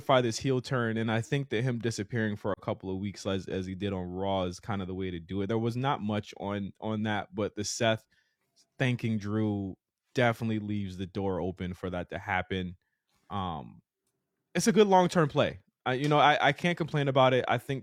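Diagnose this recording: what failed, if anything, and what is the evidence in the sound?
The failure is in the codec stage: AAC frame loss with muting. A brief dip in the speech runs from 2.53 to 2.59 s, between "that him disappearing for" and "couple of weeks as". It lasts about 43 ms, which fits one lost frame. The decoder zeroed the lost spectrum, and the overlapping windows faded the sound out and back in.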